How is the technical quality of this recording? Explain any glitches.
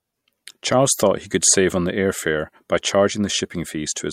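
Nothing in the recording stood out as a technical problem on listening.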